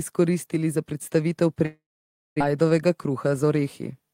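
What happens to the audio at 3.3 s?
From 3.09 to 3.67 s the speech hurries in a jitter buffer speed-up. The receiver had built up excess buffered audio and trimmed it by cutting short pitch-period pieces repeatedly, about 50 ms in all. Delivery runs at roughly 107 % speed with unchanged pitch.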